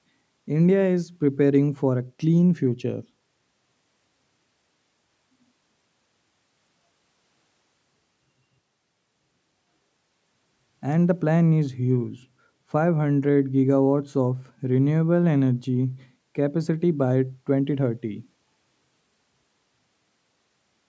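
No technical faults can be heard anywhere in this speech.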